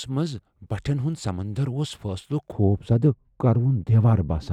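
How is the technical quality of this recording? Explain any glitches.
The speech has one fault. From 2.52 s to the end, de-emphasis is applied wrongly: a treble-cut filter acts on audio that was never pre-emphasised, or is applied twice, tilting the response smoothly downward to about 11 dB lower at 10 kHz than at 1 kHz. The speech turns dull and muffled, losing crispness.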